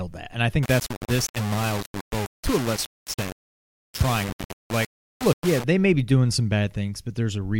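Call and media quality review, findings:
Low bit depth without dither, 0.63–5.64 s, ending just before "may be doing some". Gritty distortion tracking the speech; quiet tails sputter or cut to silence. Likely an undithered requantiser rounding to roughly 4 bits. Waveform: coarse stair-steps. Spectrogram: broadband grit only under speech, about 10 dB down.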